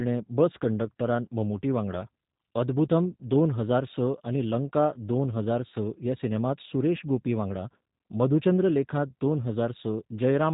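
From start to finish the speech sounds slightly rough and synthetic, with nothing above 4 kHz, the plainly audible signature of the G.729 codec at a rate that fits 8 kbit/s. It rebuilds each 10 ms frame from a vocal-tract filter, pitch predictor and sparse pulses.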